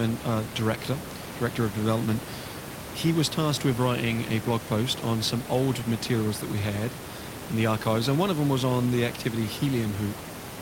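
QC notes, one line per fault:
Nothing stood out on listening; the room noise sits about 10 dB below the speech and belongs to the recording space.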